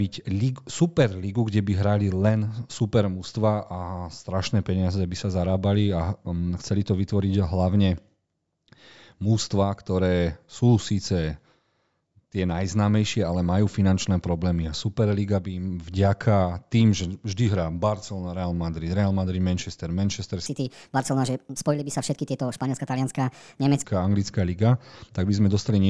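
Speech audio whose samples, from 20.46 to 23.84 s, are played faster than they were captured with no conversion, a wrong sample rate that fits 16 kHz material clocked out at 22 kHz. That stretch runs 1.38 times too fast and about 5.6 semitones high, so the voice turns hurried and squeaky.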